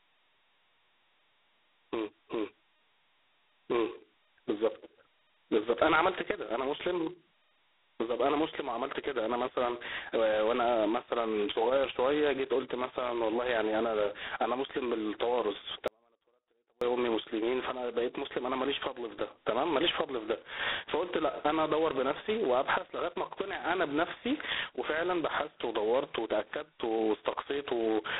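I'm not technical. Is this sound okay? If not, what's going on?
No. The whole recording has a harsh, rasping hiss that rises and falls with the talking, and it sounds thin and muffled, like an old phone line. That's G.726 ADPCM, a telephone coding method. Instead of sending the sound itself, it sends small corrections to a guess about how the sound changes. Here it is squeezed very hard, so the corrections are rough and leave that gritty hiss. It also cuts off everything above about 3.9 kHz, which removes the crispness.

From 15.88 to 16.81 seconds, almost a full second, the speech suddenly vanishes, leaving only a very faint trace far below the normal level, then snaps straight back. That's an audio dropout to a faint residue. It starts and stops abruptly rather than sounding like a natural pause. The likely cause is that the signal was lost briefly while the rest of the recording path kept running, so only that faint remnant got through.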